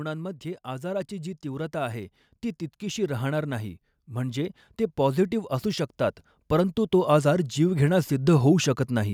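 From 2.79 to 5.97 s the whole speech clip swells steadily, the voice and the background noise floor rising together by about 6 dB, and from 6.49 to 9.09 s it climbs again by about 5 dB. This is automatic gain rising: the gain control judged the input too quiet and pushed its gain up over roughly three seconds each time, so the room sound lifts in step with the speaker.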